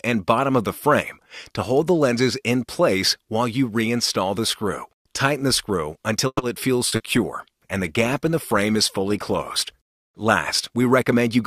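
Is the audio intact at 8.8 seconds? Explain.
No. At 8.8 seconds the audio sits inside a call bitrate drop running from 6.89 to 9.82 s. The call's bandwidth estimate fell and the encoder was pushed to spend far fewer bits, which fits a fall from 96 kbps to about 28 kbps, held near the bottom for roughly 2.9 s. The coarser coding makes the sound rough, watery and muffled, with the top end cut away. On a spectrogram the upper frequencies thin out or vanish abruptly over that span and the remaining detail looks blotchy. The waveform's overall envelope changes little.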